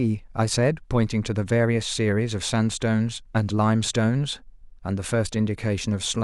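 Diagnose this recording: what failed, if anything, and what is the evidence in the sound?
No fault is audible anywhere.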